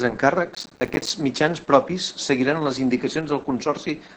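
From the first moment to the end, the speech carries Opus voice compression at about 10 kbps in its SILK mode. The low rate forces coarse coding of the excitation, so the voice sounds muffled, hoarse and faintly robotic, with heavy codec damage. On a spectrogram the energy stops abruptly near 9 kHz, leaving an empty band above, and the harmonics below look smeared and blotchy instead of cleanly striated. The regular texture points to 20 ms coding frames.

Between 0.54 and 1.10 s, processor overload crackle tears through the speech, ending just before "mitjans propis seguiran les". The processor repeatedly failed to deliver its small buffers on time, dozens of misses in a row, each leaving a hard-edged gap of silence. The spacing suggests buffers of around 5 ms. The result is gritty, sputtering crackle. The waveform shows a comb of sharp dropouts, and the spectrogram shows thin vertical broadband streaks at each edge.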